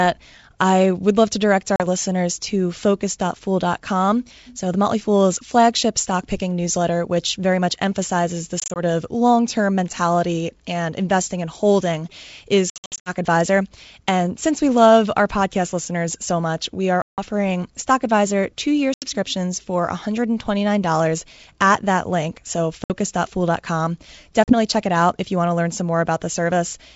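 Speech over G.722 wideband telephone coding, with packet loss on an ADPCM call producing hard silent gaps at 1.76, 8.6, 12.7 to 13.13, 17.02, 18.94, 22.84 and 24.44 s. The audio lost in each event totals 40 to 260 ms. After each one the decoder's predictor and step size are out of step with the sender, so the speech comes back slightly distorted before it settles.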